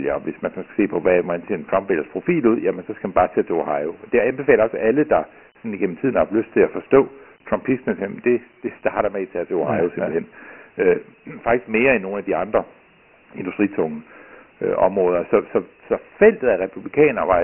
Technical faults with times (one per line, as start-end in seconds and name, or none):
0.00-17.43 Dialogic VOX ADPCM